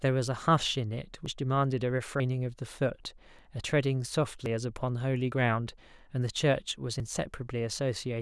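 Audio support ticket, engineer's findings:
Skips, no gap, at 1.26, 2.2, 4.46, 5.32 and 7.0 s. The first two jump roughly 70 ms, the last three about 20 ms. Likely dropped buffer (overrun): capture samples overwritten before being read, with the remaining audio spliced directly together.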